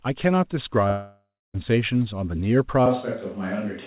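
From 0.88 to 1.56 s the sound breaks off in a long network dropout, likely a stretch of packets that never arrived. The last sound is stretched into a fading buzz, and for about the final 0.28 s only silence remains. The waveform shows a decaying smear and then a flat gap.

From 2.86 s to the end, the sound turns roomy and hollow, with thinner bass. This is likely a switch to a distant microphone. The level barely changes, but a room-noise floor roughly 35 dB below the speech appears. On a spectrogram, reverberant tails blur the onsets, and energy still stops at 4 kHz, as it does throughout the clip.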